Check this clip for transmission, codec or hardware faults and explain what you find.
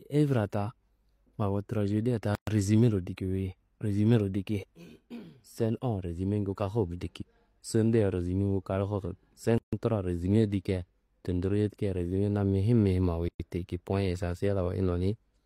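Three gaps at a join of encoded pieces break the speech, at 2.35–2.47 s (123 ms, between "awo trajedia ta" and "resumero diki"), 9.58–9.73 s (147 ms, just before "truwa resume dikia") and 13.28–13.40 s (112 ms). The clip was encoded in separate pieces and joined untrimmed, so each join keeps the encoder's start-up delay and last-frame padding. What you hear is a short silence with smeared edges, and the speech resumes where it stopped.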